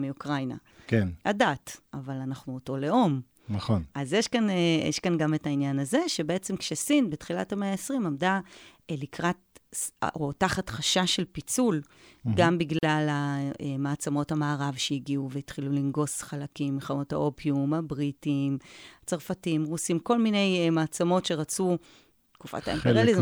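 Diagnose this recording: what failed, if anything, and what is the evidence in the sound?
Codec stage: a gap at a join of encoded pieces, about 41 ms of silence from 12.79 to 12.83 s, where untrimmed encoder delay and final-frame padding interrupt the speech.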